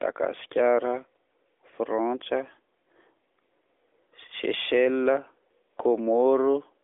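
There are no technical faults to describe in this speech.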